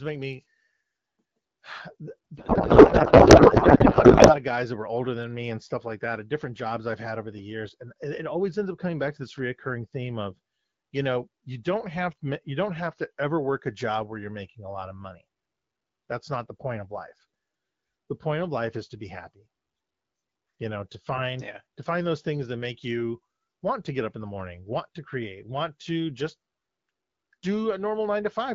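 From 2.37 to 4.34 s, a codec payload misread turns the speech into garbled noise and warble, ending just before "of guys that were". Octet-aligned AMR frames are apparently being read as bandwidth-efficient, so fields land in the wrong places. From 12.69 to 13.23 s, between "don't have to you" and "work a job where", the speech slows by about 5.6% and drops a semitone. It then snaps back. This is likely a drift correction step.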